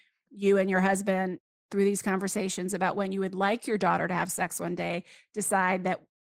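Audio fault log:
Throughout – Opus voice compression: the speech sounds hoarse and faintly robotic, with plainly audible coding damage. This fits Opus running in hybrid mode near 16 kbps, where a linear-prediction layer carries the voice band with a coarsely coded excitation and a thin transform layer covers the upper range.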